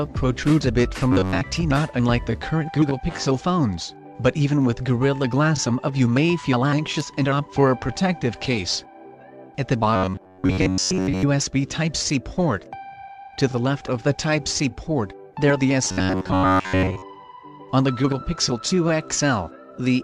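A rigid metallic buzz near 94 Hz is heard at 1.13–1.42 s, 9.96–11.23 s and 15.85–17.02 s: robotic sound, likely from repeating roughly 11 ms buffers while most real audio is skipped.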